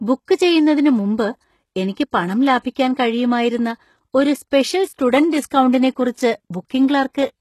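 Throughout the recording, the treble is likely not coded directly but rebuilt from lower bands by spectral band replication, the method behind HE-AAC compression. Heavy damage of this kind fits a very low bitrate of around 16 kbps. The regenerated top end has harmonics that don't line up with the real ones, so sibilants come out gritty and metallic, and nothing survives above 12.3 kHz.

At 2.75 s, the codec spreads the quantisation noise meant for a sharp attack across its whole transform block, so the noise leaks into the quiet moment just before the onset. The result is a pre-echo of about 13 ms, a brief hiss that arrives ahead of the attack and blurs its edge, heard just before "കഴിയുമായിരുന്ന ഒരു സ്പെഷ്യൽ സ്റ്റുഡന്റ്".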